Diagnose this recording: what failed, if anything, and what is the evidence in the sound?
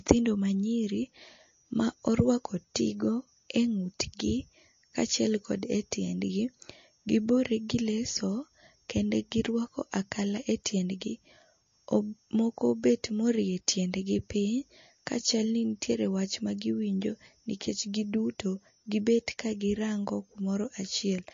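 The codec stage is the likely cause, from MP3 compression. Throughout the speech, nothing is heard above 7.2 kHz. The top end stops at a hard edge rather than rolling off. The s sounds are dull and carry a swirly, watery texture. The damage is plainly audible from start to end. The encoder ran short of bits, cut the treble at a fixed frequency, and dropped weak detail frame by frame. That fits a low bitrate around 32 kbps.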